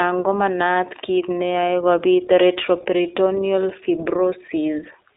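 From start to finish the speech runs through an iLBC codec: nothing above about 3.8 kHz, a phone-line band of roughly 300 Hz to 3.7 kHz, and a plainly rough, synthetic edge from 20 ms frames coded independently, which fits iLBC's 15.2 kbps mode.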